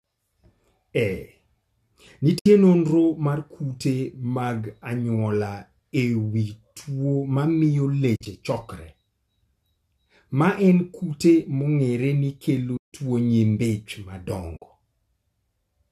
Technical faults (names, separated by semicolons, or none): AAC frame loss with muting